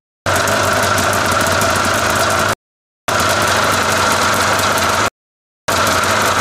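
Rebuffering stalls at 2.53 and 5.08 s. The player ran dry and fell silent for about 0.55 and 0.6 s. The sound then resumes exactly where it stopped.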